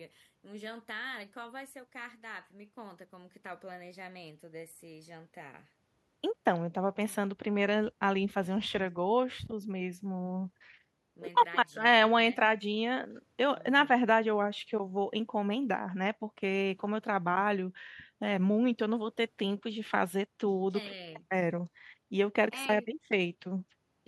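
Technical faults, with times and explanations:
Nothing here to flag: the speech runs along with no technical faults to point to at any moment.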